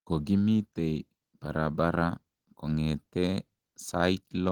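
Speech with Opus voice compression throughout, plainly audible as a slightly hoarse, robotic texture consistent with roughly 16 kbps hybrid coding; a spectrogram shows smeared, blocky harmonics, with content reaching about 20.1 kHz.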